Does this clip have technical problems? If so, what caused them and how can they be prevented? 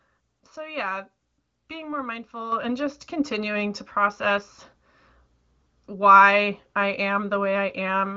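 Yes, there's a microphone volume step-up at 2.52 s, just after "yeah being more": the call software bumped the input gain about 7 dB in one go, so voice and background jump together. To prevent it, turn off automatic mic level adjustment and set the input level manually before the call.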